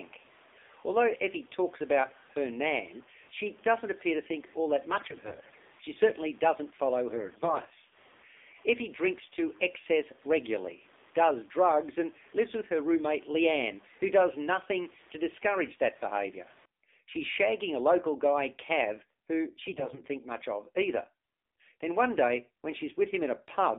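Throughout, the speech sounds thin, boxed-in and plainly buzzy, with nothing above about 3.6 kHz and little below 250 Hz. That is the AMR narrowband mobile codec at work: the audio has been squeezed through a telephone-band mobile speech coder that rebuilds each 20 ms frame from a vocal-tract model and a handful of excitation pulses. The plainly synthetic, buzzy edge fits a low mode around 7.4 kbps.

From 4.92 to 5.55 s the speech turns hoarse and gargly, scratchy but still at roughly the same pitch and loudness. These are AMR bit errors. Flipped bits in the weakly protected part of each frame misplace the excitation pulses and skew the finer pitch, gain and spectral values, at a rate of about one bit in ten. A milder stretch of the same roughness follows from 7.10 to 7.73 s, with fewer bits corrupted. A third, moderate burst runs from 19.66 to 20.01 s, ending just before "think much of either".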